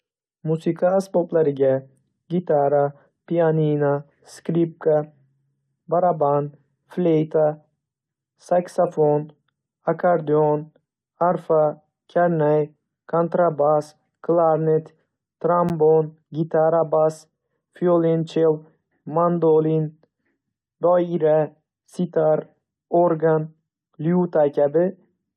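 At 15.69 s the speech breaks for about 11 ms, a gap between stream segments. The time stamps of two adjacent segments, which fits segments about 6 s long, leave a small hole, and the player fills it with digital silence, so nothing is lost but a brief hard-edged dropout is heard as a tiny click or stutter. On a waveform it shows as a flat line with abrupt edges; a spectrogram shows a thin vertical blank band across all frequencies.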